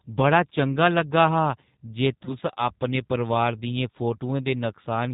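The whole recording has been squeezed through the G.729 codec at 8 kbit/s, which discards the waveform and rebuilds the speech from a vocal tract filter, a pitch predictor and a few pulses per frame. The damage is plainly audible. Nothing above 4 kHz survives, so the speech sounds narrow and muffled at the top, with a rough, slightly synthetic texture from the coarse pulse modelling.

At 2.25 s the stream loses audio, and the decoder covers the gap with VoIP packet loss concealment. About 20 ms of audio is missing, which points to a single lost packet. In its place the decoder extends its last pitch and filter state with falling gain, producing a short stretched sound that fades. Because each frame builds on the previous one, the speech stays weak or distorted until about 2.35 s, after the real audio has resumed.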